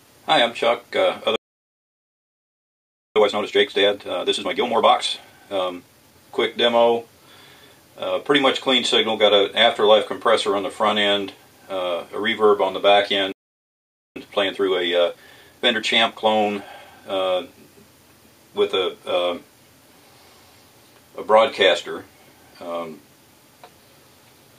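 Playback stalls at 1.36 to 3.16 s and 13.32 to 14.16 s: the audio cuts to silence in mid-flow for about 1.8 s and then about 0.84 s, most likely because the player's buffer ran dry or its thread was blocked, before it resumes. Time-compressed catch-up follows each stall, from 3.16 to 6.16 s at 1.5 times speed and from 14.16 to 17.16 s at 1.25 times. The player trims its backlog by removing and cross-fading short slices, so the sound rushes at unchanged pitch.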